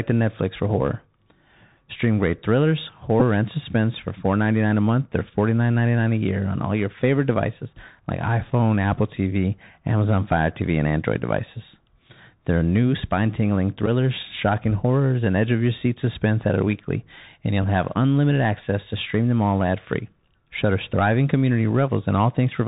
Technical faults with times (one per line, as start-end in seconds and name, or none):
0.00-22.67 Bluetooth CVSD headset codec
3.20-3.22 Bluetooth headset packet repeated
13.86 Bluetooth headset packet repeated
17.63 Bluetooth headset packet repeated